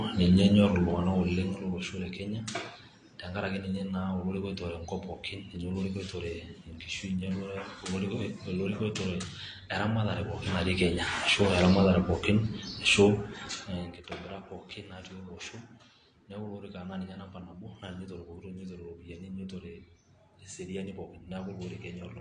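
AAC compression, throughout the speech: nothing above 9.7 kHz and plainly audible smearing and fizz, likely from AAC-LC at a low bitrate around 32 kbps.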